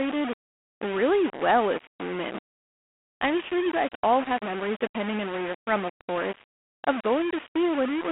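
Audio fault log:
Throughout: low bit depth without dither. The speech is coarse and grainy, and the grit rises and falls with the voice. The quietest passages sputter or drop out. The likely cause is rounding to very few levels, roughly a 4-bit signal, with error only about 10 dB below the speech.
Throughout: G.726 ADPCM. The speech is confined to a telephone band of about 200 Hz to 3.4 kHz, with nothing above 3.8 kHz. A harsh, rasping hiss tracks its loudness. The codec sends only a coarse difference from a running prediction, which fits 24 kbit/s.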